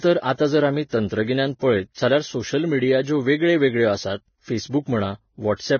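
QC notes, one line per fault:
throughout Vorbis compression: heavy grainy hiss and nothing above 6.6 kHz, which fits a bitrate near 17 kbps; the treble is likely being quantised so coarsely that detail turns to noise.
0.34–0.39 s, 0.89–0.92 s, 1.59–1.62 s pre-echo: hiss of 47, 28 and 24 ms smears attacks before "जर आमी तंत्रगिन्यान पळयत", after "जर आमी" and after "जर आमी तंत्रगिन्यान", as block-wide quantisation noise fills the quiet gap ahead of each onset.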